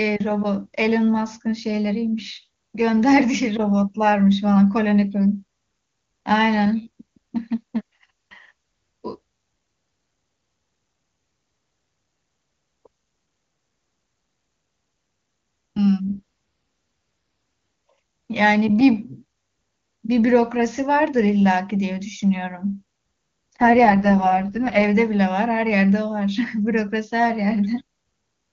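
At 16.06 to 16.20 s and again from 23.62 to 24.84 s, an AMR rate drop forces the AMR-WB codec down to a much lower mode, which fits a fall from 23.85 to 6.6 kbit/s. The bandwidth holds without gaps, but the speech turns rough, raspy and synthetic before clearing again.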